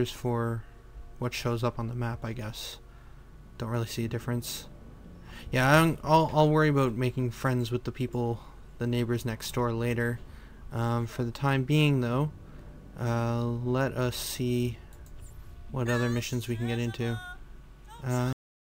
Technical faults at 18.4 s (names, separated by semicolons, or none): cut-off end